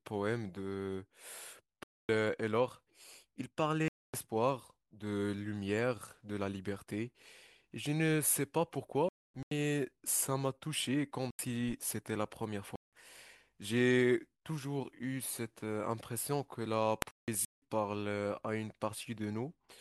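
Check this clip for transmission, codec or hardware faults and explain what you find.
The speech drops out six times. Each is a corrupt frame muted. The gaps fall at 1.83 to 2.18 s, 3.88 to 4.14 s, 9.09 to 9.51 s, 11.31 to 11.73 s, 12.76 to 12.99 s and 17.02 to 17.61 s. Damaged compressed frames were rejected by the decoder. Silence replaced them. Each hole cuts in abruptly and spans several frame lengths, from about 0.23 s to 0.59 s. The surrounding timing stays intact.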